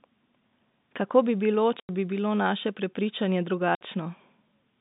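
Packets were lost and the receiver filled the gaps with silence, so the speech drops out abruptly from 1.80 to 1.89 s (90 ms) and from 3.75 to 3.81 s (60 ms). Both holes fit 30 ms packets, and their hard edges cut through the narrow telephone band.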